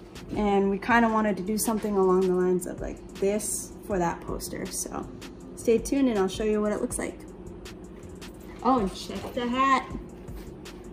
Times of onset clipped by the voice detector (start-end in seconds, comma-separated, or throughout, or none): none